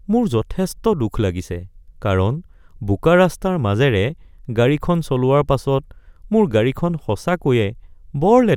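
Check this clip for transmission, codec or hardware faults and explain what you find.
No transmission, codec or hardware faults turn up in this clip.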